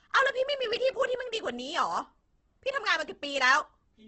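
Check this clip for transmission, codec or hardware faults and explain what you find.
There's one fault, and it runs through the whole clip: the speech sounds coarse and grainy, with nothing above about 8.4 kHz. That's most likely heavy Opus compression in its music (CELT) mode at a very low rate, around 12 kbps. With so few bits, the encoder preserves each band's overall energy but fills the detail with folded copies of lower bands or noise, so consonants and vowels come out rough rather than swirly. The narrowed wideband limit adds a dull edge.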